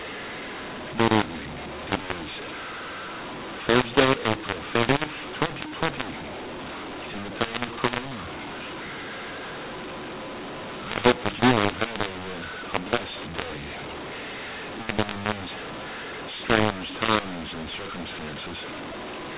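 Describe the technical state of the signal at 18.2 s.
At 18.2 s the speech is harsh and distorted, with levels scrambled and the quiet gaps filled with noise, as throughout the clip. This is mu-law and A-law mixed up: the 8 kHz A-law telephone stream is being decoded as mu-law, so each sample lands on the wrong logarithmic step.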